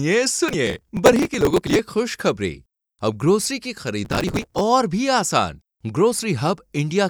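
Processor overload crackle from 0.48 to 1.79 s and 4.05 to 4.61 s: many missed buffer deadlines in a row skip short chunks, consistent with roughly 5 ms buffers, producing gritty tearing.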